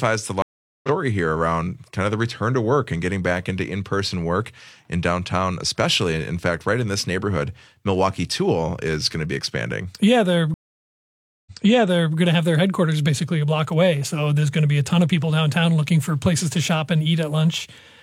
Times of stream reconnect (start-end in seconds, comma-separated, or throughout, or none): 0.42-0.89, 10.54-12.16